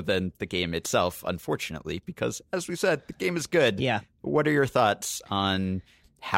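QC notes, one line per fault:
No faults heard in this speech recording.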